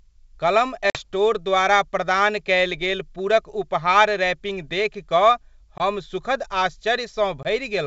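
At 0.90–0.99 s, 5.78–5.82 s and 7.43–7.47 s the speech drops out in packet loss on an ADPCM call: about 50 ms of audio vanishes first, then about 20 ms twice. The gaps are filled with silence, and the decoder's predictor and step size lose track of the sender. Each hole has hard edges, shown as a flat waveform and blank vertical strips on a spectrogram. The G.722 wideband speech then returns slightly distorted.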